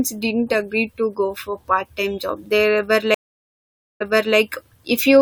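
At 3.14 s a stream reconnect drops the speech into 0.86 s of silence; unlike a plain dropout, a fresh decoder resumes about 0.36 s earlier, repeating a moment, until 4.37 s.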